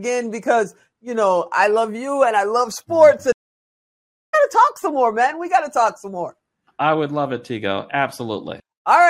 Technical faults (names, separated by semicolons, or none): stream reconnect